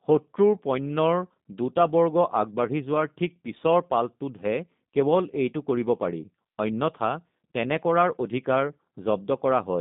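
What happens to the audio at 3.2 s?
At 3.2 s you're hearing the same G.729 codec coloring that runs through the whole clip, not a one-off glitch. The speech is rebuilt from a vocal tract filter, a pitch predictor and a handful of pulses per frame, at a rate that points to 8 kbit/s. The line band sits around 150 Hz to 3.7 kHz with nothing above 3.8 kHz, so it sounds muffled, a bit rough and synthetic.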